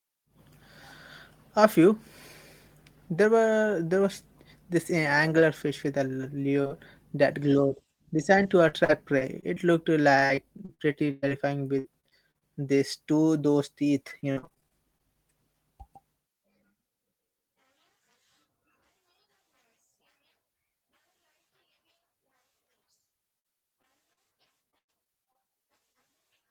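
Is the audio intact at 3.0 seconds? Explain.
Yes, the speech at 3.0 seconds is intact, with no fault present at that moment.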